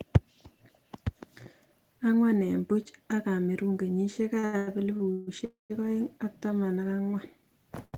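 From 4.39 to 5.29 s there's a run of repeated stalls, a stutter: five separate gaps where packets showed up late and the jitter buffer kept draining. The receiver held the last sound through each one, the longest about 150 ms, so nothing's lost, but that stretch drags.

Right after, between 5.45 and 5.72 s, comes a call audio freeze lasting about a quarter of a second. The last sound carries on briefly, then drops to silence for about 150 ms before the audio resumes where it stopped. The likely cause is packets held up in transit, emptying the buffer.

Near the very end, from 7.85 to 7.95 s, there's a short stall from a late packet. The receiver stretched the final sound by about 77 ms while it waited, so that bit hangs on a touch too long with a faint buzz or dip.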